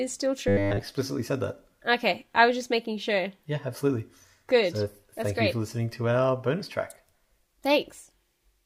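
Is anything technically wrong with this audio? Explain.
Yes. From 0.48 to 0.82 s, just before "said that", there is robotic sound from repeated short buffers. The likely cause is that fresh audio reached the playback software too rarely, so it kept replaying its last short buffer and skipped the real signal for most of that stretch. The constant repetition imposes a fixed pitch of 100 Hz, which fits a 10 ms buffer, and the speech becomes a stiff metallic buzz that only loosely tracks the syllables.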